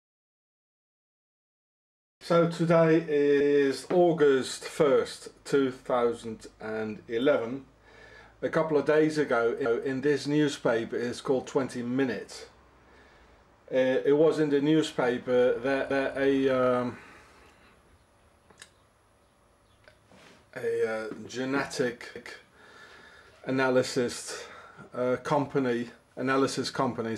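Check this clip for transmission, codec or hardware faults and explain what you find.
One fault type appears: overlapping chunks, at 3.40, 9.65, 15.90 and 22.15 s. Each chunk of roughly 6 s begins before the previous one ends, so about 250 ms replays at every join, a regular stutter that repeats material rather than dropping it, unlike a gap or skip.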